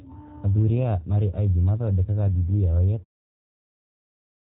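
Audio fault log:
throughout, G.729 codec: the speech is band-limited to about 4 kHz and has a rough, slightly synthetic edge. This fits an 8 kbit/s G.729-type coder, which rebuilds each 10 ms frame from a vocal tract filter, pitch prediction and a few pulses. The editorial fade-out ending around 3.05 s carries the same coloration.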